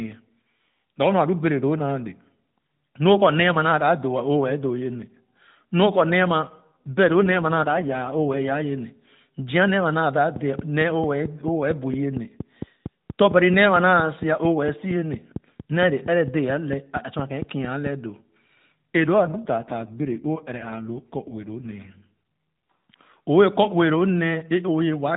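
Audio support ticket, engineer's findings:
Speech turns rougher, buzzier and more synthetic at 6.46 to 8.53 s (about 2.1 s) and again at 18.96 to 22.11 s (about 3.2 s). Same band, no gap, clears on its own. AMR rate drop in the AMR-NB mobile path. The degradation fits the link forcing the codec from 12.2 down to 5.9 kbps, trading speech detail for error protection on a weak radio leg. Outside those spans the narrowband codec's damage is light.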